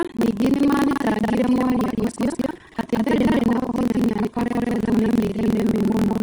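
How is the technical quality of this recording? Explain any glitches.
The technical quality is poor, with two faults running through the whole speech recording.

Vorbis compression, throughout: the treble is heavily degraded. This is likely a Vorbis encode at a low bitrate, near 29 kbps. The codec coarsely quantised the upper band, turning fine detail into hiss-like noise, so the speech sounds grainy and consonant onsets are smeared.

Buffer tearing, throughout: the writing software and the playback hardware have drifted out of step, so their positions cross within every buffer period, which fits a 2048-sample buffer. About half of each buffer replays audio from roughly a fifth of a second earlier, with abrupt joins. The result is a steady robotic rattle at 21.5 Hz that is heard whenever speech is present.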